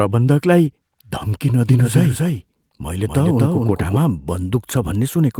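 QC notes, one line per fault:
1.69–3.97 s, doubled audio track: the speech was likely captured a second time through a slower path and mixed back in, so a full-band copy trails around 300 ms behind at about 5 dB quieter, with no decay or room colour, cutting in and out abruptly.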